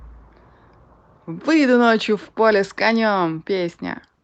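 No faults are audible; the speech comes through a call path whose band stops near 8 kHz, consistent with Opus at 32 kbps.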